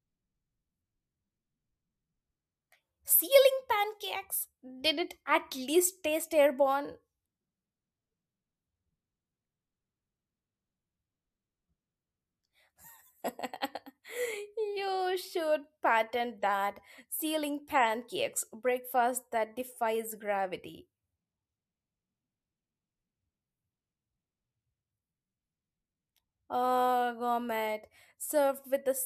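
No technical faults can be heard anywhere in this speech recording. There are no times or values to report.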